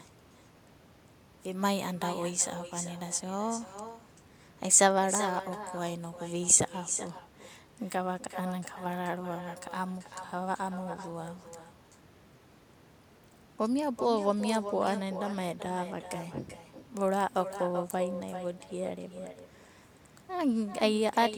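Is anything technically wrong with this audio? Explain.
Yes. Throughout the speech, echo with no canceller returns each phrase roughly 400 ms later, about 11 dB quieter and thinner. It is a distinct delayed copy from a far-end loudspeaker, not smooth room reverberation.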